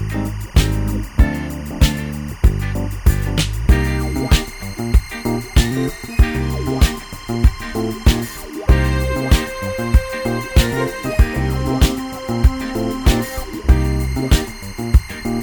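Timecode bleed runs through the whole clip: linear timecode from a neighbouring track or cable has leaked into the audio path. The code is a square wave flipping between pitches of around 1 kHz and 2 kHz, and at a rate that fits 24 frames per second it produces a steady, chirping warble sitting roughly 25 dB beneath the sound, audible behind it from start to finish and never changing character.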